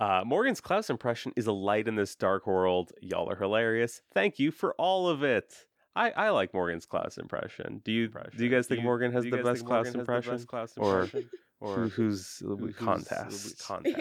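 From 8.05 s right through to the end, the speech picks up a doubled audio track: a second, quieter copy, around 10 dB down, trailing the original by roughly 0.7 s. It cuts in abruptly, full-band, with no reverb tail or room colour, so it reads as a clean echo rather than a space. The likely cause is the same signal being captured again through a slower path and mixed back in.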